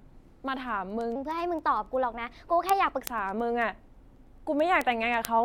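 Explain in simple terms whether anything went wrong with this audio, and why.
There are steady sharp word clock ticks from 0.14 to 5.36 s, about ten a second. The receiving gear's clock drifts a couple of hundred parts per million, so a sample slips each time.

From 1.16 to 3.01 s the speech plays 1.18 times too fast, about three semitones higher and rushed. That's a section at the wrong speed, likely played against the wrong clock.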